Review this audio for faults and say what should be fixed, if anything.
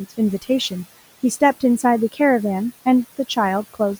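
Noise suppressor artifacts run through the whole clip: the suppressor pulls bands it judges to be steady noise down by about 15 dB frame by frame, so the room noise, about 20 dB below the speech, drops away between words and swells back beneath them. Lowering the suppression depth or improving the microphone's signal-to-noise ratio would prevent this.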